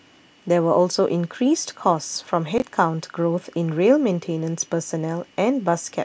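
At 2.58 to 2.62 s, chunks arrive out of order: one 20 ms chunk was delivered a single chunk late, so the two swap places. No audio is lost, but three hard joins produce a brief jumbled stutter in the speech.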